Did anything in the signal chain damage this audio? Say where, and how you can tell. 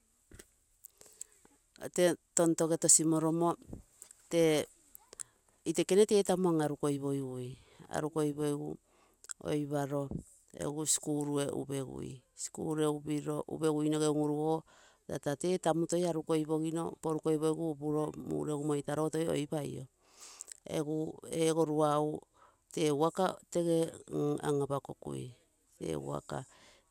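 No, nothing in the chain has left an audible mark on this speech, with no stage from capture through playback showing damage.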